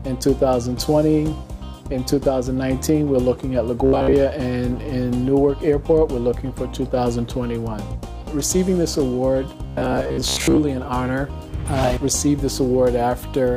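From 3.86 to 4.17 s, and again from 9.67 to 10.60 s, the sound turns into a rigid, metallic buzz fixed at about 67 Hz, following the audio's shape only loosely. This robotic sound from repeated short buffers likely comes from new audio arriving too seldom: a slice of roughly 15 ms is replayed to fill the gap, and the real audio is skipped. About two thirds of the first stretch is repeated material, and about half of the second.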